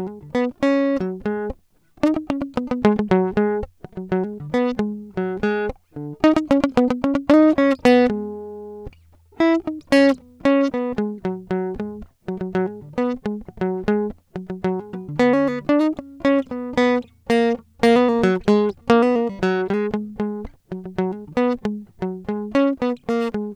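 No technical faults are audible in this music.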